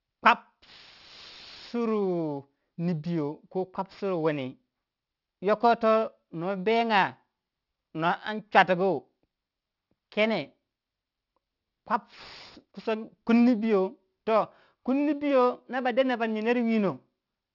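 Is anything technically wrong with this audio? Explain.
Yes. Aliasing runs through the whole speech clip. Content above 6 kHz folds back into the band below it, which fits a drop to a 12 kHz rate with no anti-alias filter. Sibilants turn gritty and metallic, with spurious tones roughly 25 dB under the speech.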